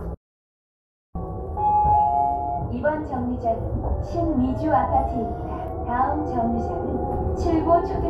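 Right at the start, from 0.15 to 1.15 s, there's an audio dropout to silence: the sound cuts out cold for about a second, with no room tone at all. Most likely the input briefly disconnected or got muted while recording carried on.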